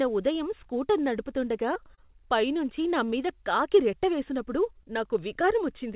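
Repeated packet loss (robotic sound) runs from 1.74 to 2.26 s, right after "ఉదయం స్కూటర్ నడుపుతుండగా". Seven short holes, the longest 22 ms, were each patched by extending the preceding sound, so about a fifth of that stretch is synthetic and the speech turns choppy.

Short concealed packet loss follows at 4.78 to 4.88 s, with a second hole overlapping it at 4.83 to 4.87 s. Each time about 20 ms failed to arrive and was bridged by continuing the last sound, the first adding about 4 ms, which produces a brief smear or wobble. Throughout, the narrowband call path, which points to a G.711-type codec, leaves nothing above 4 kHz.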